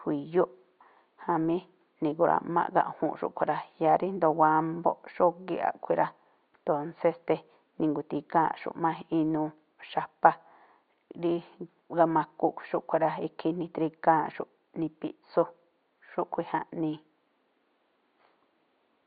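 No faults are present in the speech; only the room's own background noise sits underneath, about 47 dB below the speech level.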